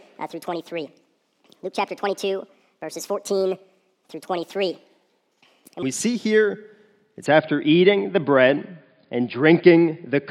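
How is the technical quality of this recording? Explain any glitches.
The recording has two technical faults, one at the start and one at the end.

From 0 to 5.83 s a section plays at the wrong speed, about 1.47 times too fast, likely from playback or editing against the wrong clock. Pitch rises by roughly seven semitones while the tempo hurries. Because pitch and timing shift together, this is a speed error rather than a pitch-correction artefact.

From 7.26 s to the end, the input has switched to a poorer device, likely a headset or secondary microphone. The band narrows and the sound turns dull and boxy, with a faint new noise floor far below the signal. Level stays the same and there's no gap at the switch. That new noise and the change in tone set it apart from a simple low-pass filter.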